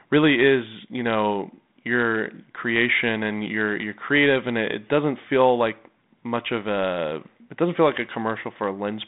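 Nothing in this speech stood out as a fault on listening.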